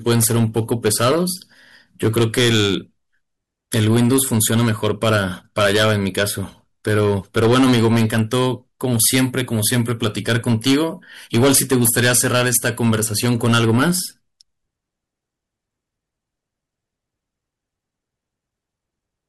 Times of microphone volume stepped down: none

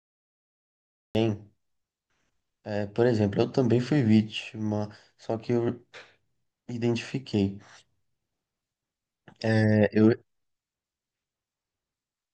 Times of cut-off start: 0.00-1.15

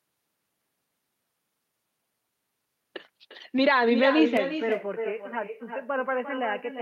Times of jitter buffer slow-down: none

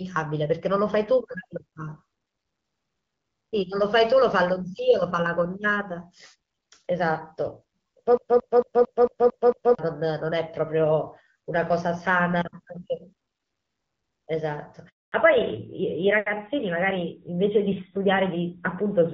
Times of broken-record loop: 8.17-9.79

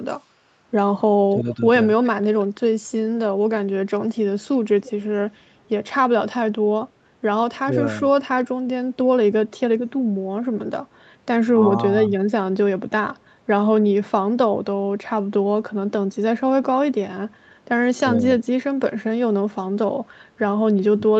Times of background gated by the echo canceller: 0.23-0.32

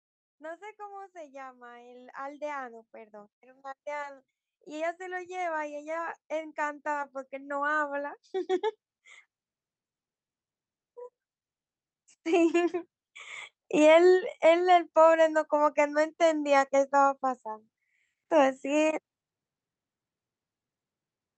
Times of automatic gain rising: 0.37-8.77, 13.69-16.49

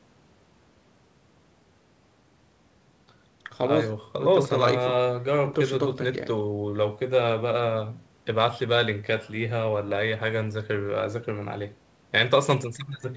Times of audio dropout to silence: none

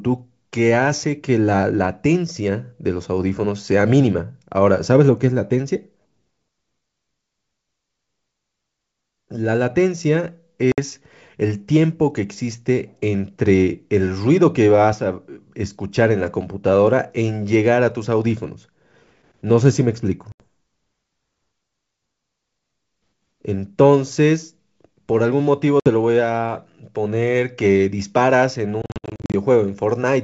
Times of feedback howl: none

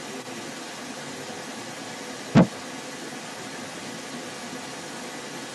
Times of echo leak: 0.00-5.55

